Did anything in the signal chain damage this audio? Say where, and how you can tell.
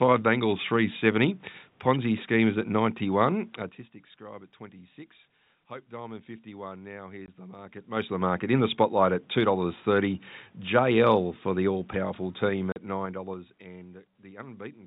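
Yes. The speech drops out abruptly twice, at 7.26 to 7.28 s and at 12.72 to 12.76 s, with hard-edged gaps. The gaps are 20 ms and 40 ms long, which fits one and then two lost 20 ms packets. This is network packet loss filled with silence.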